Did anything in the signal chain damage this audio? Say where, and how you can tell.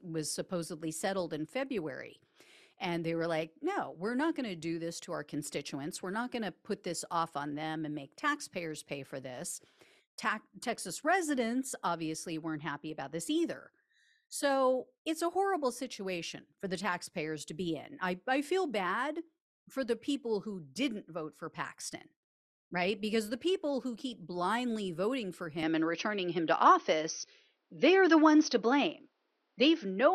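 Yes. At 25.63 s, right after "keep blindly voting for", the speech abruptly turns duller and boxier and stays that way to the end. Nothing above 6.2 kHz remains, the level shifts by roughly 5 dB, and a new noise floor appears about 50 dB below the signal, with no gap at the switch. This is likely an input switched to a poorer device at the driver stage. A codec bandwidth drop would narrow the band without changing tone, level and background noise all at once.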